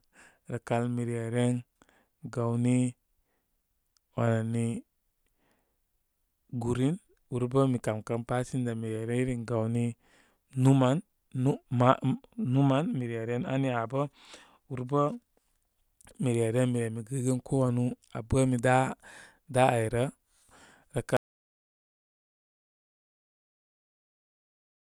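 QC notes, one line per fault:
21.17 s to end: audio dropout to silence, speech cuts off mid-flow into silence, likely lost input; waveform flatlines, spectrogram goes completely blank with no room tone.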